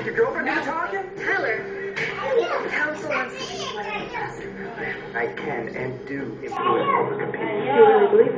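At 6.57 s the sound abruptly turns dull and boxy and stays that way to the end. Nothing comes through above about 3.8 kHz, the level shifts by a modest amount, and a faint new background noise sits well below the signal. There is no gap at the change. This is most likely an input switched to a poorer device: the recording jumped mid-take to a narrower-band microphone or headset path with its own tone, gain and noise.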